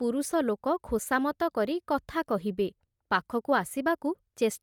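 The speech in this clip has a breathy, grainy edge from start to finish, with the upper frequencies sounding hashed and noisy rather than clean, though the band still reaches up to about 20.2 kHz. This is plainly audible Bluetooth LC3 compression, most likely the cause. The LE Audio codec discards fine spectral detail in each short frame and substitutes noise, and the texture here fits 10 ms frames at a bitrate of around 48 kbps.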